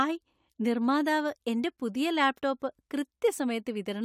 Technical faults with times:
none

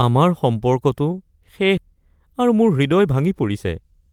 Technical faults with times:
1.77-1.79 skip ahead
1.88-4.07 jitter buffer speed-up

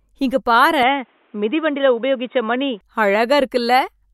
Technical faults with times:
0.83-2.81 input switched to a poorer device

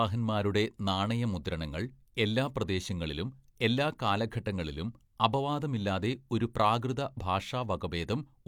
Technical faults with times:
none

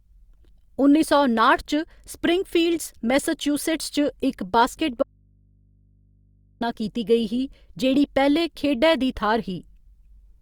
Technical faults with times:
5.03-6.61 audio dropout to a faint residue

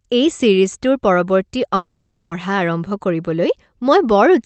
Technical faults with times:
1.75-2.33 long network dropout

